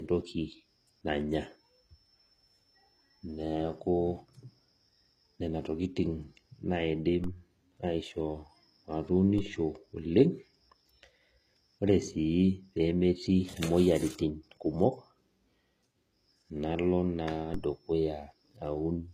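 Low-bitrate audio saved at a high bitrate affects this entire speech recording: the MP3 holds nothing above 14.9 kHz, likely because an earlier low-bitrate encode removed that content and the later high-rate pass cannot restore it. DC steps occur at 7.24 s, just after "nena tokitin naidim", and again at 9.38 s and 17.54 s. Each sudden shift of the waveform's zero line lands as a low thump, then decays as a high-pass near 5 Hz pulls the offset back.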